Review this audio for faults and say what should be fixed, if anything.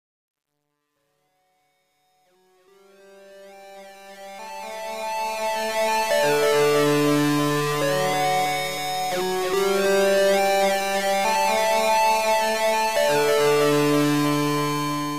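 Truncation distortion on the fade-in runs from 0.0 to 5.94 s. The gain stage driving the fade appears to drop the signal to a coarse word length without dither, which fits roughly 10-bit resolution. At low levels the waveform collapses into a handful of square steps, so the opening of the rise sounds gritty. It is worst from 0.0 to 3.69 s and clears as the fade reaches full level at 5.94 s. To prevent it, keep the fade in a high-resolution path and apply dither whenever the word length is reduced.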